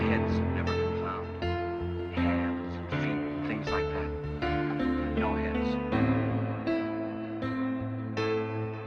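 No audible faults anywhere in the audio; nothing to flag.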